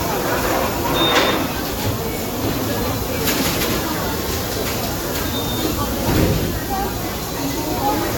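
Throughout, the audio was likely decoded and re-encoded about four times with a lossy codec, each pass quantising again on a shifted frame grid. This generation loss leaves the sound swirly, smeared and hollow, with blurred attacks, nothing above 17.3 kHz, and character pointing to Vorbis near 68 kbit/s.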